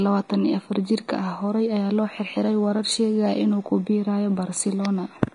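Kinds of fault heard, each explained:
Vorbis compression: the speech sounds hissy and grainy throughout, with roughened tones and smeared consonant onsets, likely from low-bitrate Vorbis coding around 33 kbps. A spectrogram would show a lowered high-frequency cut-off and treble replaced by patchy noise of similar energy.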